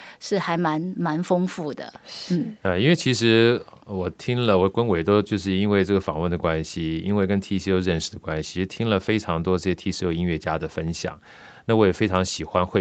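No technical faults can be heard in this speech.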